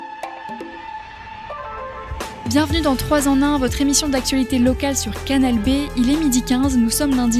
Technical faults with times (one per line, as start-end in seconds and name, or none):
none